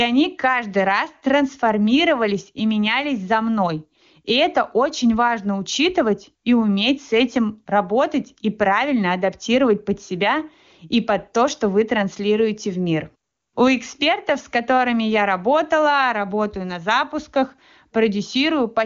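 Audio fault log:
No faults detected in this speech.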